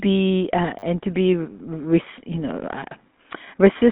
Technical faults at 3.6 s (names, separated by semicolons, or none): GSM full-rate codec